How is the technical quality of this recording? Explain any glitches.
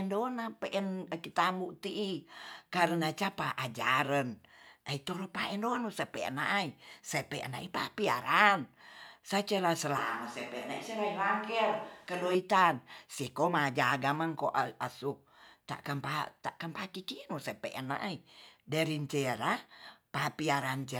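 One glitch stands out in the speech. From 9.98 to 12.35 s the voice abruptly turns hollow, roomy and thinner, about 5 dB quieter, with room noise around 30 dB below it, likely a switch to a distant microphone, such as a camera's.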